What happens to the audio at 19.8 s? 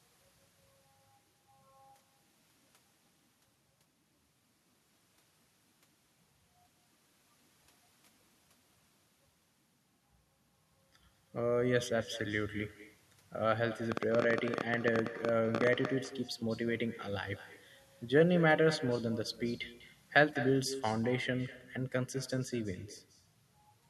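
At 19.8 s, as throughout the clip, the far end is playing the call over a loudspeaker and its microphone is picking that playback up again, with no echo canceller removing it. The result is echo with no canceller: each phrase of speech returns about a fifth of a second later as a quieter copy, about 15 dB below the original, sounding thinner, like a faint shadow trailing every syllable.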